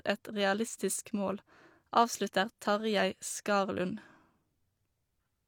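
No dropouts, clicks, distortion or timing errors are audible anywhere in the recording.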